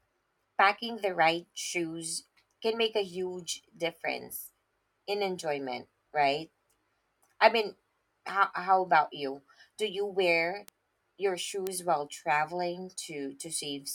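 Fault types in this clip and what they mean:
Bit error spike: a flipped bit throws a single sample off, so you get sharp broadband ticks after "you wear" at 10.68 s and "you wear your" at 11.67 s.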